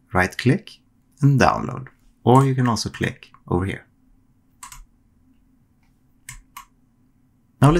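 Nothing goes wrong here at any point, so there's no technical fault to walk through in this audio.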